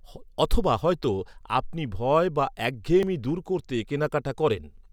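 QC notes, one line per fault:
1.04 s and 3.03 s, audio missing between chunks: a tiny skip, around 10 ms, just before "আপনি ভয় বা" and again between "আপনি ভয় বা" and "দূর করতে". The even 2-second spacing points to chunked processing, likely losing a sliver at each handover and butting the edges together.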